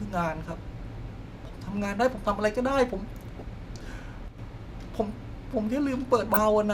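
From 3.37 to 3.46 s, and again from 6.23 to 6.39 s, DAB burbling breaks through the speech as short blips of noise in single sub-bands. Weak reception lets a small fraction of bit errors slip past the error correction into the MP2 data, so corrupted samples put short noise blips in single sub-bands and wrong scale factors make individual sub-bands leap in level for up to a frame. The longer second burst suggests around ten damaged frames. On a spectrogram these appear as scattered rectangular blocks, each confined to a narrow frequency band and lasting up to a frame.

Between 4.28 and 4.39 s the sound abruptly drops by about 6 dB and then returns just as suddenly. This is one channel dropping out, with the mono sum likely losing half of the centred material. On the waveform the envelope shows a sharp step down to roughly half amplitude across that 0.1 s stretch. A spectrogram shows the same broadband dimming with vertical edges at both ends.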